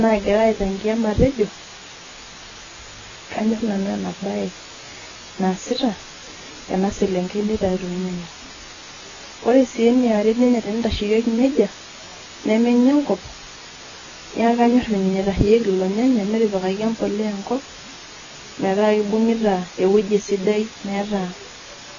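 From the very start and all the way through, there's a steady, even hiss sitting right under the speech, about 15 dB quieter than it. That's low bit depth with dither: the signal is squeezed into about 6 bits, and dither was added before rounding, so the coarse rounding error comes out as flat white noise rather than gritty distortion. It doesn't pump or change with level. It's just a constant wash of hiss over everything.

Also running the whole length, the speech sounds dull and smeared, with a watery, warbling fizz on sustained vowels and on s and sh sounds. Nothing comes through above about 7.1 kHz, which is why it all feels muffled. This is likely AAC compression, specifically AAC-LC at a very low rate, something like 16 kbps. At that rate the encoder pulls the cut-off down and thins out or patches over bands it can't afford to code properly, which leaves the damage heavy.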